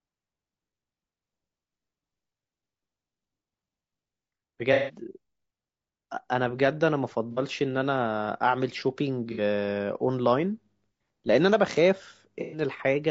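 Speech with a rough, grainy texture throughout, with noise between the harmonics and a thin top band. This is likely low-delay AAC compression, and the damage fits a bitrate near 32 kbps. AAC frame loss with concealment appears at 4.73–4.99 s, 7.31–7.40 s, 9.32–9.40 s and 12.41–12.61 s. Each gap is filled from the last good spectrum and sounds like a smeared, noisy patch.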